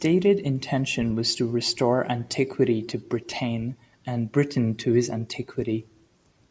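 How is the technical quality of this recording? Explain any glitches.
No glitches; the recording holds steady throughout.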